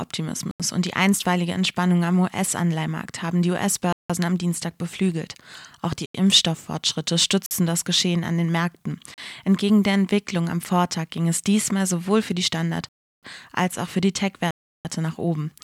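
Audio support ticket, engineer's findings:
Block of digital silence, seven dropouts: 0.51–0.60 s (before "und die einstweilige"), 3.93–4.10, 6.06–6.14, 7.46–7.51, 9.14–9.18, 12.89–13.23 (before "als auch für die"), 14.51–14.85 s (before "nach oben"). 38–341 ms holes. Waveform: flat silent runs, hard edges. Spectrogram: black vertical bands edged by broadband lines. 85, 171, 341 ms gaps fit 4096-sample multiples: output buffer not filled in time.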